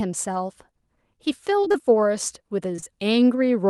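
Speech that passed through an Opus call path, with its top end stopping around 12 kHz, suffers repeated packet loss (robotic sound) from 1.61 to 1.76 s. In that stretch, packets kept arriving too late or not at all, in holes of up to about 21 ms. The receiver patched each one by extending the preceding sound, so nearly half of that span is synthetic fill. The result is choppy sound with fragments of the speech missing. Short concealed packet loss follows at 2.76, 2.80 and 2.84 s, three back-to-back 20 ms dropouts ending at 2.88 s. Each time the decoder bridged the hole by continuing the last pitch or shaped noise and then blending back into the real signal. This leaves a brief smear and wobble, and a quick consonant there may be swallowed.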